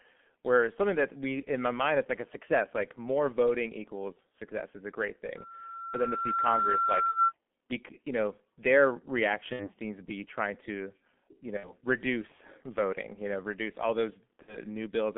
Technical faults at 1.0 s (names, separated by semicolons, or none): G.723.1 codec